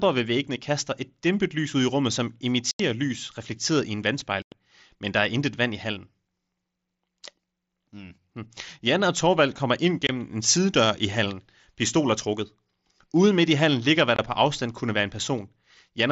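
Speech with four abrupt gaps where the sound cuts out and returns sharply: at 2.71 s for 86 ms, at 4.42 s after "lys reflekteret i en" for 102 ms, and at 10.07 s and 14.16 s for 26 ms each. This is unconcealed Bluetooth headset packet loss. Runs of short headset voice packets were lost and replaced with silence or an idle pattern instead of being concealed.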